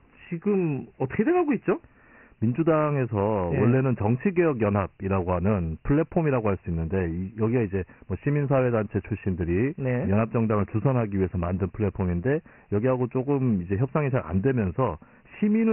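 From start to finish the speech has passed through Dialogic VOX ADPCM, 4-bit adaptive coding at 24 kbps, which fits a 6,000-sample rate. Nothing survives above 3 kHz, leaving the voice thin and muffled, and heavy coding grit hisses along behind every phrase.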